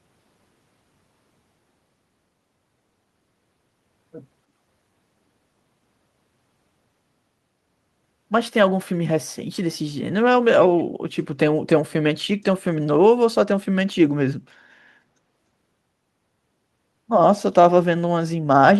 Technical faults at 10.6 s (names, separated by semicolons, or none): echo leak